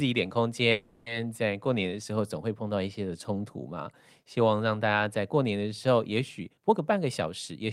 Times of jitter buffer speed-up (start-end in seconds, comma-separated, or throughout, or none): 6.39-7.61